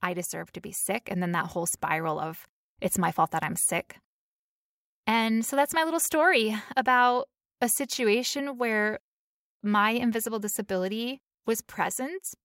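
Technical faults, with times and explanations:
No technical faults are audible.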